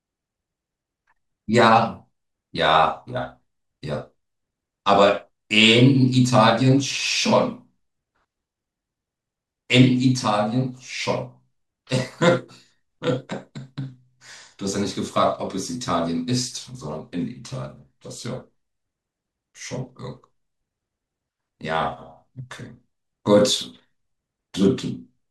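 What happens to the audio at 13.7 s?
At 13.7 s the speech is inside a drift correction step running from 13.18 to 13.90 s. For those 0.72 s the audio plays about 5.2% fast, and pitch rises by roughly 88 cents, close to a semitone, before snapping back to normal at 13.90 s. The likely cause is clock-matching software changing the playback rate in a single step to drain or refill its buffer, which shifts speed and pitch together as one sudden detuning.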